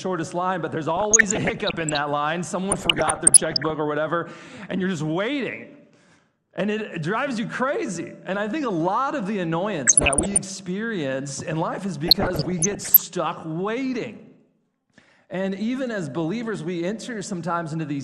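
The whole recording sounds dull and grainy, with a gurgling texture. That points to MP2 compression, likely at a low rate near 80 kbps. Too few bits leave upper sub-bands switched off, and the remaining bands are coarsely quantised.

DAB burbling appears from 0.97 to 1.98 s, 2.71 to 3.70 s, 9.87 to 10.39 s and 12.06 to 13.02 s. Bit errors, around 0.7 to 1 percent, slip past error correction. Short blips of noise land in single sub-bands.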